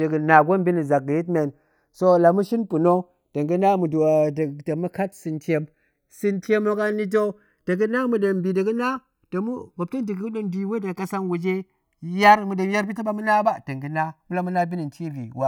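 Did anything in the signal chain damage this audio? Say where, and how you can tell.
Yes. Channels drifting apart runs throughout this speech: the two sides come from converters on separate clocks, mismatched by roughly 70 ppm, so the offset grows to about 1.5 ms. Heard in mono, comb notches glide steadily in one direction, unlike an effect flanger's back-and-forth sweep.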